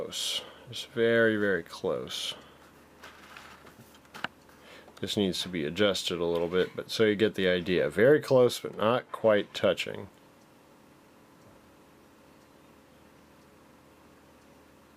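From 8.68 to 9.68 s, channel delay (comb filtering) dulls the top end: one channel lags by roughly a sample, a tiny fraction of a millisecond, so the mono sum cancels highs near 20 kHz. A spectrogram shows the uppermost band thinning for that second.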